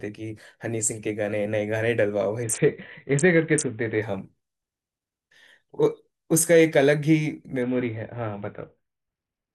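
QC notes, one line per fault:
2.43–4.02 s and 7.62–9.54 s, Bluetooth SBC bit pool drop: the link congests and the encoder falls to a far smaller bit pool, which fits a drop to around 54 kbps. The top sub-bands are starved and the rest coarsely quantised, so the speech loses treble and turns gritty until the rate recovers.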